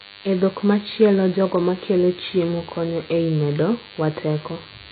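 A DECT cordless phone buzz runs through the whole speech clip: a thin 100 Hz tone with stacked harmonics, roughly 20 dB below the voice, drawn as evenly spaced horizontal lines on a spectrogram.

The speech is also dull and warbly, with no content above 4.6 kHz. This is likely heavy AAC compression at a very low bitrate near 16 kbps, and it shows on a spectrogram as a hard ceiling with patchy gaps below it.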